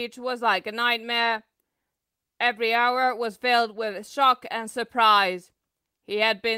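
Speech recording with nothing technically wrong with it at any point.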